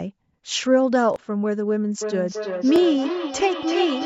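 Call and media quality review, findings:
Repeated buffer at 1.14–1.16 s and 2.76–2.78 s. Brief stutter with a hard join. Playback side. Audio arrived late, so the device replayed its last 20 ms buffer once. About 20 ms of fresh audio lost each time.

Feedback echo between two devices from 2.01 s to the end. Speech returns at roughly 300 ms intervals, thinner and ringing, peaking about 8 dB below the direct speech. A second device in the room replays the other device's microphone. That device's echo canceller cannot remove that sound.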